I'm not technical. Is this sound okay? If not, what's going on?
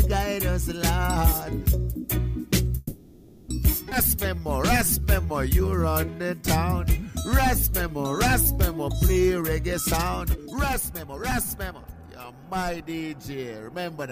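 No. The connection hiccupped several times, and each one changes how the sound plays back.

From 2.77 to 3.51 s there is a call audio freeze. Packets of sound were most likely held up on their way to you, and the receiving end ran out of audio to play. To cover the wait it kept stretching the last bit of sound into a fading buzz or hiss for 0.71 s. When the delayed audio arrived, playback picked up exactly where it had stopped, so nothing is lost. The sound simply pauses in an odd way.

Right after that, at 3.90 to 3.94 s, comes a skip ahead. A piece of audio was thrown away while later audio was already waiting, so playback jumps forward. About a third of a second of sound is missing, and the two sides are joined almost directly, with only a tiny blip where the cut is.

Between 5.00 and 6.44 s, and again between 6.92 and 8.12 s, there is a jitter buffer slow-down. The receiver's small reserve of waiting audio was running low, so it repeated tiny slices of the sound many times in a row to build the reserve up. 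The pitch stays the same, but things play slower and sound drawn out. The first stretch runs at 89% speed and adds 172 ms. The second runs at 95% and adds 65 ms.

From 10.33 to 12.94 s there is a jitter buffer speed-up. Now the receiver had more audio stored than it wanted, so it cut out many tiny slices in a row to catch up. Playback runs at 126% speed at the same pitch, which sounds hurried. About seven-tenths of a second is removed in total.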